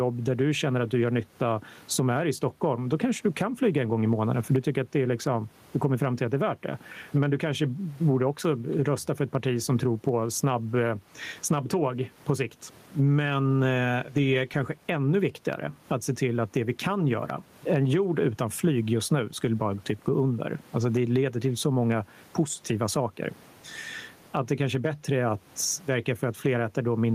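Gain pumping runs throughout: the gain swings by around 15 dB, squashing loud and soft parts closer in level, likely a fast limiter fighting excessive gain.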